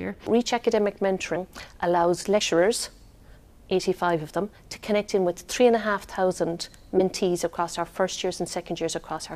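At 2.39 s the audio jumps forward, with roughly 70 ms of material missing, and a second jump between 6.97 and 7.01 s drops roughly 20 ms. These are compressed frames skipped: whole coded frames never reached the output, so playback resumes further along. A spectrogram shows an abrupt discontinuity, and the waveform shows an unnatural splice.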